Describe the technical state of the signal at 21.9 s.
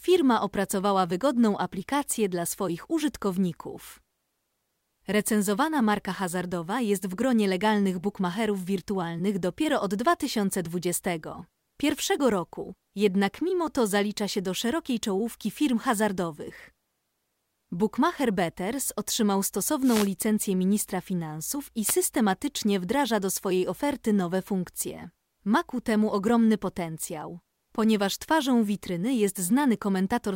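At 21.86 s, just after "ministra finansów i", the speech is hit by a wireless microphone noise hit lasting about 70 ms, to 21.93 s. The radio carrier from the analogue FM transmitter briefly dips as reflected paths cancel at the receiver. With the wanted signal weakened, the receiver's own noise comes up, and a short burst of static swishes over the voice before the signal recovers.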